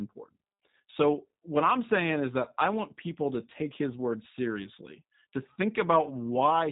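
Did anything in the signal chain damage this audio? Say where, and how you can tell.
Yes. At the codec stage, G.729 codec damage runs throughout: speech sounds rough and synthetic, with nothing above 3.8 kHz. That points to an 8 kbit/s model-based rebuild rather than a simple low-pass filter.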